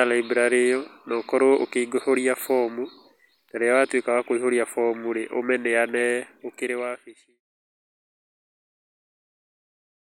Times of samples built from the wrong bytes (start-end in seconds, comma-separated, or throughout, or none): none